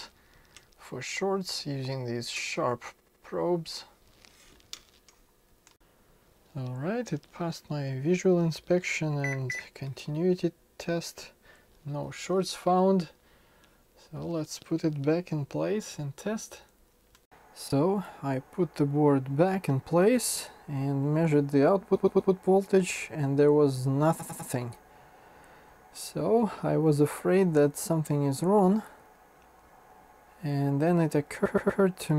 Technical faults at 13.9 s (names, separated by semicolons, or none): none